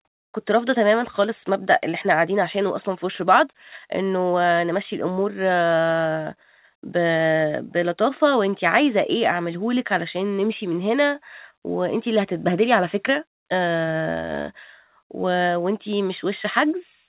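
Speech carried over a narrowband call path with no faults to report, its content stopping at 4 kHz, which fits G.711 mu-law coding.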